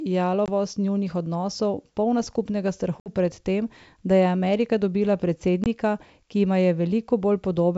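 At 0.46 to 0.49 s, 3.00 to 3.09 s and 5.64 to 5.67 s the speech drops into hard-edged silent gaps, 20 ms, 60 ms and 20 ms long, which fits roughly one, three and one lost packets on an ADPCM call. The gaps leave the decoder's adaptive predictor and step size out of step with the sender, so each return comes back with brief slight distortion before settling, over the clean wideband G.722 sound.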